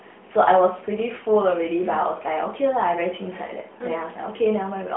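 No technical faults can be heard anywhere in the recording. The speech comes over an AMR narrowband mobile link at 12.2 kbps, so it has the familiar phone-line band of roughly 200 Hz to 3.4 kHz, nothing above about 3.8 kHz, and the light coloration typical of that codec.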